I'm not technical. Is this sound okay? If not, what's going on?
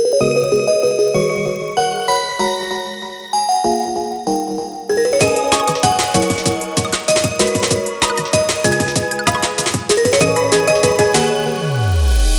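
No, there's a resampler restarted on every block: the sound's rate was converted in 40 ms chunks, leaving a faint tick at each seam, about 25 per second, throughout.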